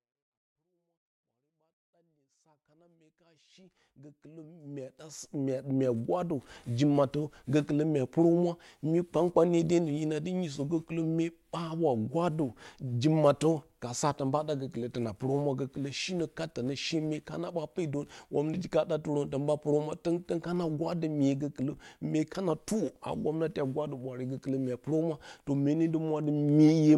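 No technical faults are audible in this speech.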